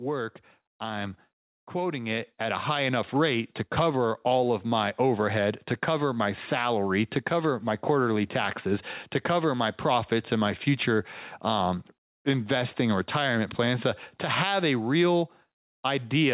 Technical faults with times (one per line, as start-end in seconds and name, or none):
0.80-2.98 automatic gain rising